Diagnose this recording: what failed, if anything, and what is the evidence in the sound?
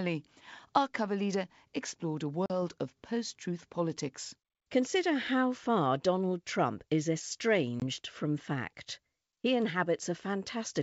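The network stage dropped packets on an ADPCM call, which is packet loss on an ADPCM call. Around 2.46 to 2.52 s about 40 ms of audio vanishes, likely a couple of packets, and at 7.80 to 7.84 s a further 20 ms gap appears. Each hole is filled with hard-edged silence. Because the decoder's adaptive predictor and step size lose track of the sender's, the speech comes back slightly distorted, with roughness that clears within tens of milliseconds, against otherwise clear wideband G.722 sound.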